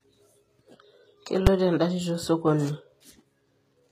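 Throughout the speech, sibilants sound gritty and lispy, with a synthetic, metallic sheen in the treble, most likely from HE-AAC compression at a low rate, around 20 kbps. Only the lower band carries real detail; the upper band is rebuilt by copying lower content upward. On a spectrogram, the treble looks smeared and blocky, and harmonics don't line up across the crossover.

At 1.47 s there is a single hard bang: invalid numbers at full scale. A calculation produced infinite or undefined values, which were clamped to the largest positive or negative value for a block of about 5 ms. The waveform shows a flat slab pinned at one extreme there, and the spectrogram shows a bright full-height vertical stripe.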